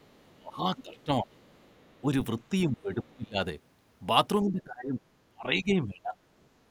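A speech recording in which the echo canceller on the talker's end likely failed to strip out the far side playing from its loudspeaker, so the other side's voice leaks through into the microphone signal. It sits very faint, around 40 dB under the speech, from 0.0 to 0.22 s. It rises to about 20 dB below from 0.78 to 1.04 s. It drops back to roughly 35 dB below from 1.39 to 2.01 s. Where both sides overlap, the same canceller likely could not tell its own talker from the loudspeaker echo and turned everything down, producing speech suppressed in double talk. The talker dips by as much as about 25 dB, losing level in pieces across roughly 0.7 s of the stretch from 0.29 to 1.37 s. There is a shallower dip of about 10 dB at 2.01 to 2.1 s. Deep cuts return from 2.5 to 3.39 s and again across most of 4.42 to 6.14 s, about one and a half seconds in total there.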